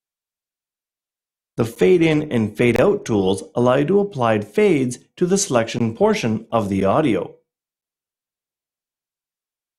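At 1.75 s the sound drops out for about 9 ms. These are gaps between stream segments. Where one segment's time stamps end short of the next one's start, the player pads the hole with silence. A longer gap of about 23 ms follows from 2.76 to 2.79 s. Others fall at 5.79, 6.81 and 7.81 s, lasting 20, 9 and 9 ms. Their edges are hard, and they land on one-second segment boundaries. Nothing is lost. Silence is only inserted.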